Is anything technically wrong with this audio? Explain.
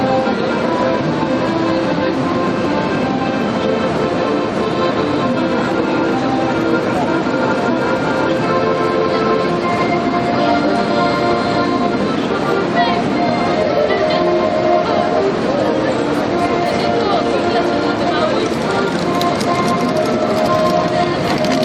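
No, nothing is technically wrong with this audio.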